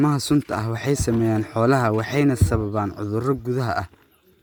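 Throughout the speech, Bluetooth LC3 compression is likely, heard as a grainy, breathy edge. On a spectrogram, noisy upper bands appear, with nothing above about 20.2 kHz.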